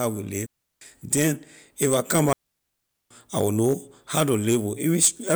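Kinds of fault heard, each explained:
digital wireless dropout: The speech twice falls into a clean hole of near silence, with no crackle, hiss or burst on either side: about 0.35 s from 0.46 s, just before "then if I come", and about 0.78 s from 2.33 s, between "then if I come" and "I know how to". The radio link lost too much data, so the receiver muted the audio with a very quick fade rather than passing on damaged sound.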